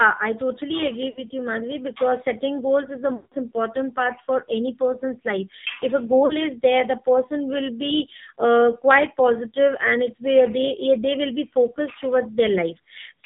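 The whole recording has passed through the AMR narrowband mobile codec. Nothing above 4 kHz survives. The speech sounds buzzy and synthetic, with heavy coding damage. That fits a low AMR-NB mode near 5.9 kbps. At that rate the codec has very few pulses to model each short slice of the voice. Fine detail is lost and the tone turns coarse.

Lost AMR speech frames then break in three times. From 1.10 to 1.23 s there is a brief warble and dip, about 60 ms of missing audio, which points to around three frames. From 3.16 to 3.34 s the gap is longer, roughly 160 ms. Here the decoder stretches the last good sound and fades it toward silence. From 6.26 to 6.42 s a short 40 ms loss gives another small dip. The speech returns rough each time.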